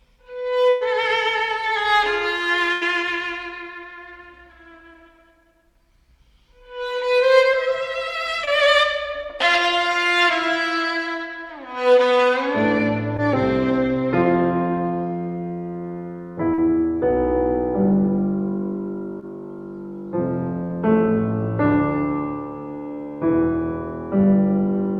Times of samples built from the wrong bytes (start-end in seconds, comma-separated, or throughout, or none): none